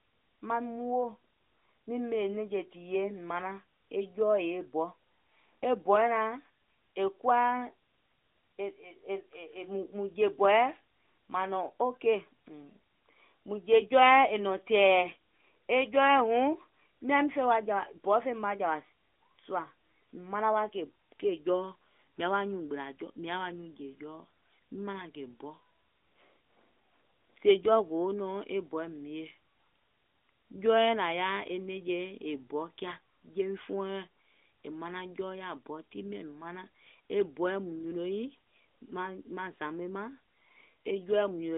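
Nothing goes wrong here; the speech simply comes over an ordinary narrowband mobile phone line, and there's no fault to point to anywhere in it.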